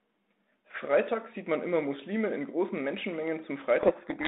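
Speech carried over a G.726 telephone link: from 3.8 s to the end, a codec payload misread, with the code words' bit order swapped, buries the voice in harsh distortion. The spectrogram turns to dense noise across the 200 Hz to 3.7 kHz band; the waveform becomes jagged and noise-like.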